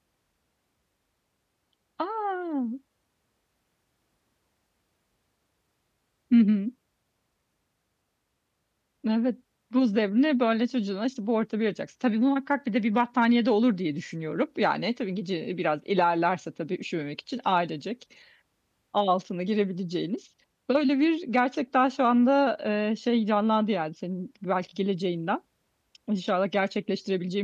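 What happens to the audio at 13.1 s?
Nothing goes wrong at 13.1 s; the speech carries on intact through that moment with no dropout, click or distortion to be heard.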